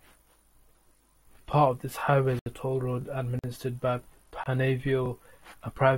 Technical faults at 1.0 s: overlapping chunks

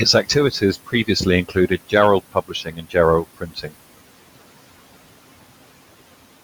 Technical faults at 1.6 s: noise suppressor artifacts; speech cut by the noise suppressor

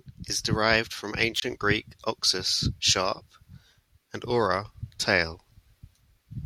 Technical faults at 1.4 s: wireless microphone squelch dropout

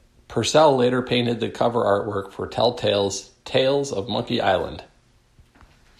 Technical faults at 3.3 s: none

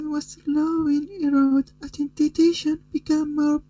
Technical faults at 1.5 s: channel delay (comb filtering); short stall from a late packet

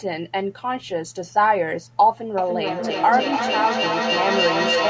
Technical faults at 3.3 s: feedback echo between two devices

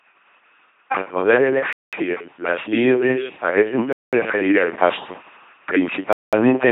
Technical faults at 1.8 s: LPC-10 vocoder; gap between chunks

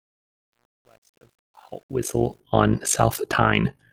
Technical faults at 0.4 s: overlap-add ripple; truncation distortion on a fade

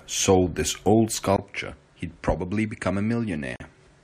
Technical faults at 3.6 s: input switched to a poorer device; gap at a join of encoded pieces

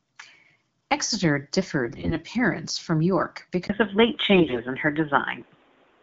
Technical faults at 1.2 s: none

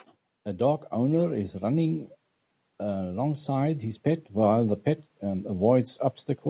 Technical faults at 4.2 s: automatic gain rising

